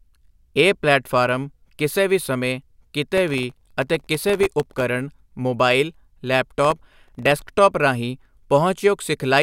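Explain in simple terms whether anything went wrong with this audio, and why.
Two bursts of processor overload crackle land on the speech, from 3.18 to 4.81 s and again from 6.65 to 7.42 s. The computer handling the audio couldn't keep up, so it kept missing its deadlines for the very short chunks of sound it processes, each well under a millisecond. Every missed chunk drops out as a tiny hard-edged silence, and dozens of them in a row make that gritty, tearing crackle. It clears once the load eases.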